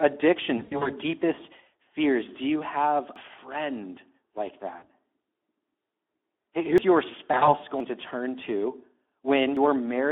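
The whole clip runs through the Speex codec at 11 kbps on a 250 Hz to 3.5 kHz line, so the speech sounds hoarse, noisy and a bit thin throughout.

From 0.57 to 0.93 s there's VoIP packet loss concealed by the speech codec. About 160 ms went missing in bursts up to 80 ms, and the decoder fills the gaps by extrapolating from the last good speech, fading it out. At 3.16 s, between "you have" and "friend like", a jump of around a tenth of a second points to a likely dropped buffer (overrun), where the hardware overwrote samples before they were read.

Right after "friend like", 4.76 to 4.83 s brings another 60 ms of concealed loss. At 6.78 s a similar skip cuts out roughly a fifth of a second. Concealment returns from 7.31 to 7.50 s, covering 80 ms of loss in runs of up to 40 ms. Jumps follow at 7.80 s, just before "to turn", and at 9.57 s, each losing about a tenth of a second.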